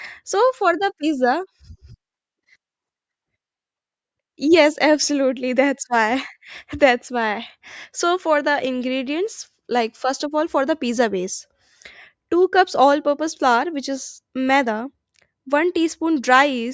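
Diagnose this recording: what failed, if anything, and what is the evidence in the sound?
No fault can be heard.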